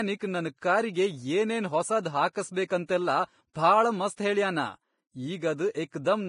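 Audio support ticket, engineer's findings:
Whole clip: grainy, hissy speech, smeared consonants, nothing above 10.5 kHz. Likely heavy Vorbis compression, low-bitrate territory (near 29 kbps), with coarse treble quantisation turning detail into noise.

Pre-echo at 2.86–2.89 s and 3.53–3.55 s: a brief hiss of about 29 ms and 21 ms leading into sharp onsets, which sound soft. Block-spread quantisation noise from the same codec.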